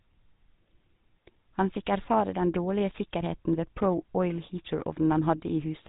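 From start to finish the speech carries GSM full-rate codec damage, consistent with roughly 13 kbps: the vocal tract is modelled and excited by sparse, regularly spaced pulses, leaving a plainly audible buzzy, gravelly grain, with nothing above 3.8 kHz. Simple band-limiting would only muffle, without this roughness.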